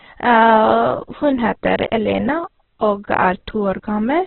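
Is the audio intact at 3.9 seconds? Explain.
No. At 3.9 seconds, as throughout the clip, the speech sounds grainy and rough, and nothing is heard above 4.2 kHz. This is likely heavy Opus compression at a very low rate, near 8 kbps. It narrows the band and fills starved bands with noise.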